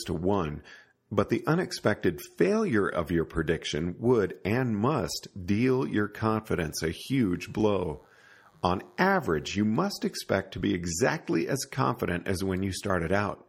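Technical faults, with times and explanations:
6.52–9.53 s, DECT cordless phone buzz: after "and must deal your", a thin 100 Hz buzz, well below the speech, where nearby DECT bursts every 10 ms were rectified.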